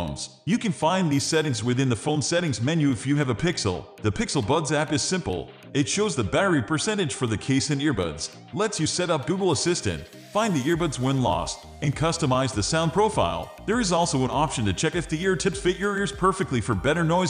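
Nothing here stands out as a technical fault; the audio carries on without any dropouts, glitches or other problems worth flagging.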